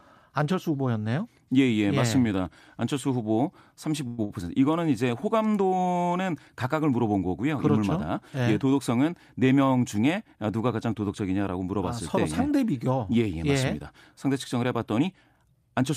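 A speech recording with three timing faults. From 4.07 to 4.19 s there is a call audio freeze: the last sound is held as a fading buzz or hiss for about 110 ms, likely from delayed packets emptying the jitter buffer. The speech then resumes without loss. At 4.24 to 4.31 s a short stall from a late packet stretches a sound by 58 ms, causing a slight buzz or dip. From 15.45 to 15.90 s a jitter buffer speed-up plays the speech at 108% speed at unchanged pitch, trimming roughly 40 ms of built-up delay.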